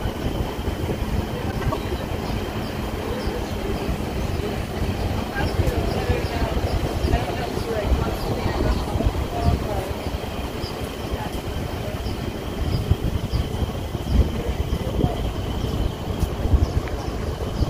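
Frames out of order from 1.51 to 1.74 s: two adjacent blocks of about 104.5 ms swap places, giving a garbled flutter. Unlike a dropout, no time is lost.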